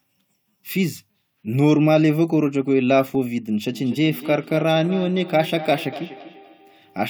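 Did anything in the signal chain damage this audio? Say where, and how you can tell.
Yes. From 3.7 s, speech repeats roughly every fifth of a second, thin and ringing, about 15 dB down: call-processing feedback echo between two devices.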